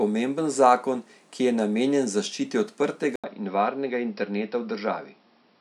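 At 3.16 s the speech drops out for 80 ms and returns duller, with nothing above 5.6 kHz, a faint new background noise and much the same level through to the end, likely an input switched to a poorer device with a narrower band partway through recording.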